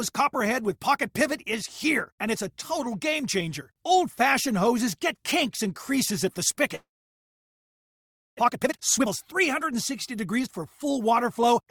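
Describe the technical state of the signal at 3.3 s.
The audio is intact at 3.3 s, with no technical fault at that point.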